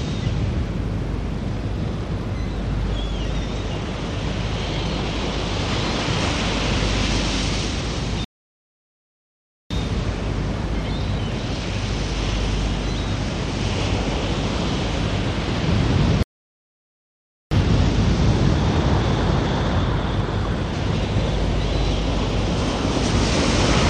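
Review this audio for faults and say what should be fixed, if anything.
There are two playback stalls, at 8.25 to 9.71 s (about 1.46 s) and 16.23 to 17.51 s (about 1.29 s), where the sound drops to silence mid-flow. The player likely ran short of data or had its thread blocked until it recovered. A larger playback buffer and an audio thread kept clear of blocking work should stop it.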